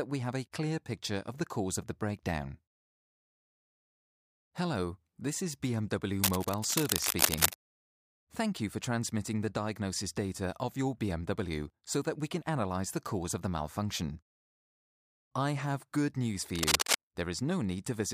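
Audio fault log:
6.18–7.56 s and 16.55–16.98 s, cable scratch noise. Dense, uneven bursts of scratching and rustling sit over the sound. The first run is roughly as loud as the sound, the second louder. The likely cause is a worn cable, connector or control carrying DC being moved, making its contact resistance jump rapidly.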